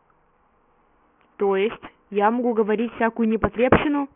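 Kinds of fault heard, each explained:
aliasing: The sample rate was cut, in a way that points to a drop from 16 kHz to 6 kHz, without a low-pass filter beforehand, so everything in the speech above 3 kHz folds back below that edge as false, unrelated tones. Throughout the clip, sibilants come out gritty and metallic, the folded content sitting only about 15 dB under the voice, and the spectrum runs hard up to 3 kHz before stopping abruptly.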